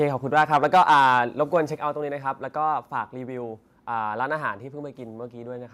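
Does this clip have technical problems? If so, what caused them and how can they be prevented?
Yes. Microphone overload runs from 0.36 to 1.17 s. The loudest speech peaks push about 6 dB past the converter's ceiling, and roughly one sample in twenty is flattened at the limit, so the strongest syllables come out harsh and crackly. The likely cause is microphone input volume set too high. Lowering the input level, or increasing mouth-to-microphone distance, leaves headroom so peaks stay below full scale.

Microphone volume stepped down occurs twice, at 0.77 s and 1.77 s. At each point the speech and the background fall together in one abrupt step, by about 2 dB the first time and about 5 dB the second. The first drop lands inside the distorted stretch. This is likely call software detecting the overload and cutting the device's input volume in one jump rather than gradually. Setting a sensible input level before the call and disabling automatic microphone adjustment avoids these sudden level changes.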